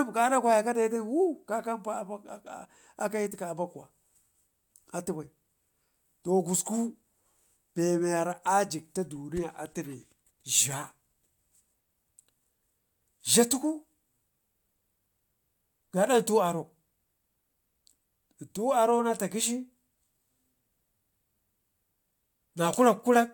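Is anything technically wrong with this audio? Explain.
No, nothing is technically wrong with this speech recording. No technical problem can be heard at any point in it.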